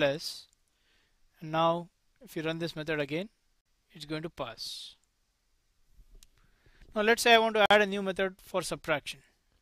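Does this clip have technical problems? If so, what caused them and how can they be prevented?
Yes. Two short holes cut into the sound at 3.61–3.66 s and 7.66–7.70 s, each about 48 ms, 4.05 s apart. This is a gap between chunks: audio delivered in 4-second blocks, with silence inserted at each join. Prevent it by buffering ahead and trimming codec padding so consecutive chunks play back seamlessly.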